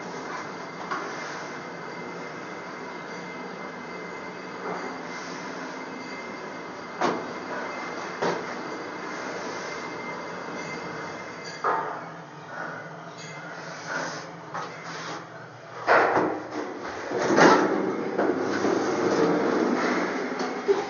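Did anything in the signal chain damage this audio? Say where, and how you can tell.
No, no signal-chain damage heard.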